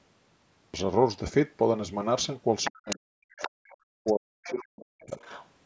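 At 0.62 s the speech enters after a pause with a clipped start. Its first sounds are missing. About 0.12 s is swallowed, up to 0.74 s. The output device went quiet during the pause and needed time to wake again. So the sound jumps in abruptly, already mid-syllable.

From 2.64 s a second voice is heard, the other side's voice leaking through. It runs to 2.97 s, about 10 dB under the main speech. It returns at 3.38 to 3.50 s, 4.06 to 4.13 s, 4.44 to 4.53 s and 5.22 to 5.47 s. The scrap at 3.38 s is again about 10 dB down; the last three are fainter, about 20 to 25 dB down. The likely cause is the loudspeaker's playback reaching the microphone. The echo canceller left part of it behind.

Meanwhile the main speech is suppressed in double talk. This happens from 2.68 to 3.78 s, then again from 4.00 to 5.19 s. Both sides were talking at once. The echo canceller likely could not tell its own talker from the echo. 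It turned everything down. The speech dips. At its deepest it falls by around 40 dB. Roughly a second is affected in each span.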